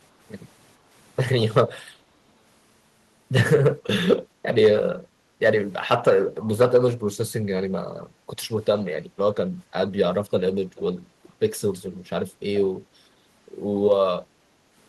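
At 5.1 s, 8.11 s and 9.05 s the room background briefly sinks, each dip lasting around a tenth to a sixth of a second and reaching about 6, 7 and 8 dB down respectively. This is background gated by the echo canceller: while far-end audio played through the loudspeaker, the canceller pulled the microphone gain down, so the ambient bed ducks momentarily and then recovers as soon as the suppression releases.

At 10.75 s and again at 11.23 s, a faint, short copy of the speech surfaces roughly 432 ms behind the original, sitting about 25 and then 30 dB below it. The pattern is consistent with echo leak, likely from a loudspeaker-based endpoint whose canceller failed to fully remove its microphone pickup, so residual playback was returned down the line as brief, quiet fragments.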